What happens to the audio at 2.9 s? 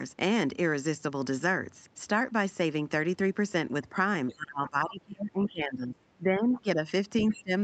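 At 2.9 s the speech carries on intact, with no dropout, click or distortion, only the ordinary band limit of call microphone processing, which leaves nothing above 8 kHz and trims the lowest bass.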